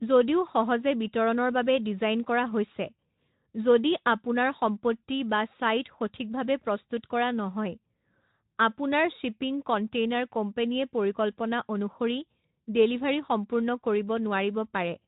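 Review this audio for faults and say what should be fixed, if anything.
No faults turned up in this review of the speech, so nothing needs to be fixed.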